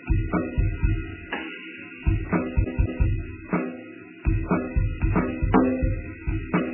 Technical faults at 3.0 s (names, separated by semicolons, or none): MP3 compression; CD stuck on one turn